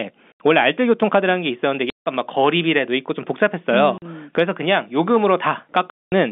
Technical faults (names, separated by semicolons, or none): packet loss filled with silence